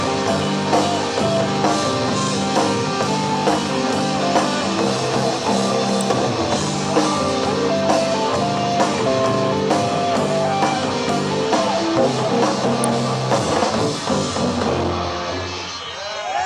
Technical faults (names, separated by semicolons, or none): electrical switching spike